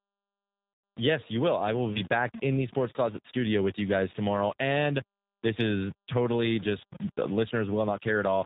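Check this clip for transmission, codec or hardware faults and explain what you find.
Two faults are present: low-bitrate codec coding across the whole clip and one concealed packet-loss gap.

G.729 codec, throughout: The speech passes through G.729A at 8 kbit/s, which rebuilds each 10 ms frame from a vocal-tract filter, a pitch predictor and a handful of pulses. Nothing above 4 kHz survives, so the speech sounds band-limited and dull, and the damage is plainly audible as a rough, slightly synthetic buzz on the voice.

VoIP packet loss concealed by the speech codec, 0.74 to 0.84 s: About 100 ms of audio went missing, which fits roughly five 20 ms packets. The decoder filled the hole by repeating its last pitch and filter settings with falling gain, so the speech smears into a fading buzzy tone or coloured noise. Because each frame depends on the previous one, the speech sounds weak or distorted for a short while after the gap ends.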